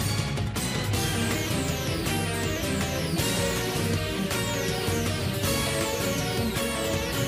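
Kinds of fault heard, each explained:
No technical faults can be heard in this recording.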